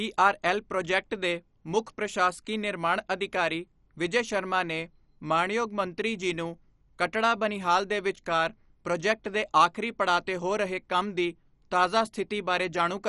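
Throughout, the speech sounds dull and gurgling, with nothing above 11.3 kHz, likely MP2 compression starved of bits, consistent with roughly 48 kbps, coarsening and switching off sub-bands.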